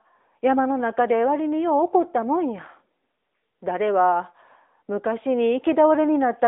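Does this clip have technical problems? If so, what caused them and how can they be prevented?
Yes. The whole recording carries AMR narrowband mobile codec damage, which is plainly audible: the speech has the buzzy, slightly synthetic edge of a vocal-tract model rebuilt from sparse pulses, and the graininess suggests a mid-rate mode of roughly 10 kbps. On a spectrogram the band runs from about 250 Hz to 3.7 kHz, with nothing above 3.8 kHz, a flat ceiling across the clip. Record or transfer over a wideband path instead of a narrowband mobile call.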